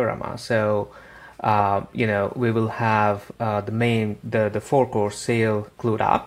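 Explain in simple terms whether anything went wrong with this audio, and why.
A repeated buffer at 1.95 s. The next piece of audio arrived too late, so the device replayed the one it had just played, about 1.45 ms long, which fits a 64-sample buffer. That repeat is so brief it comes across as a click or a brief buzz.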